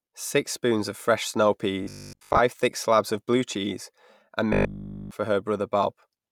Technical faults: robotic sound from repeated short buffers

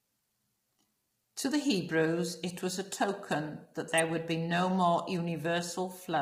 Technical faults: low-delay AAC compression; electrical switching spike

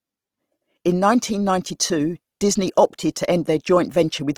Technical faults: Opus compression

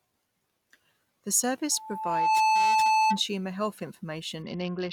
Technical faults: loudspeaker feedback squeal; Bluetooth SBC bit pool drop

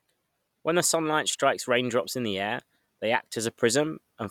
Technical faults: none

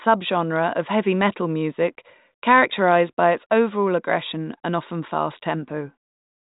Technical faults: none

